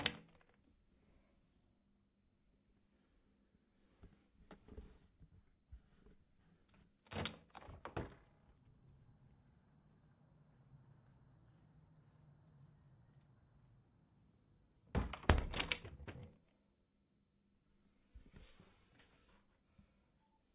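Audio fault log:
No technical faults can be heard anywhere in this recording of sounds.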